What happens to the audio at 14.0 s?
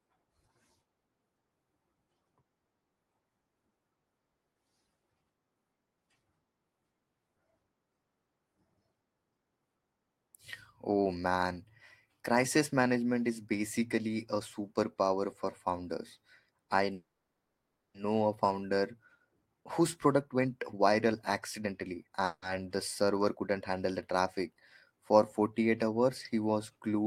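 At 14.0 s the speech carries on without interruption and no fault can be heard there.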